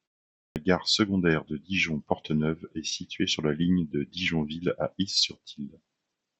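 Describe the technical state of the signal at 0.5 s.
At 0.5 s you're right in the middle of a clipped start after a pause, running from 0.45 to 0.56 s. The sound sits on a 0.45 s stretch of silence, and the output device seems to have dozed off during it, so it needs about 109 ms to wake up and lock again. That opening chunk of speech just never makes it out, so the word comes in abruptly with its first sounds missing.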